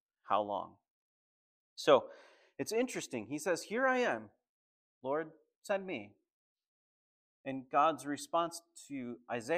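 No technical faults can be heard anywhere in the recording. There is nothing to place on a timeline, because no moment stands out as a problem.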